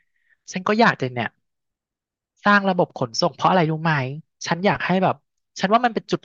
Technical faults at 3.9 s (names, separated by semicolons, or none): none